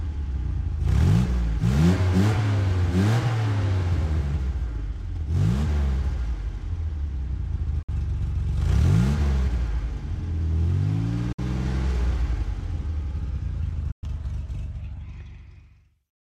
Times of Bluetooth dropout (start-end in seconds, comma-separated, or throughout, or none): 7.82-7.89, 11.32-11.39, 13.91-14.03